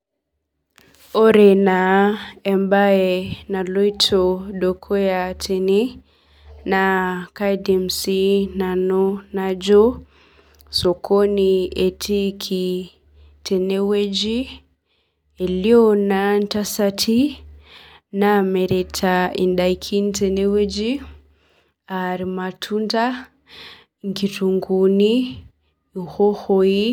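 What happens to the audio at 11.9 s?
Nothing goes wrong at 11.9 s: the speech carries on intact, with no dropout, click, glitch or change in level or tone at that point.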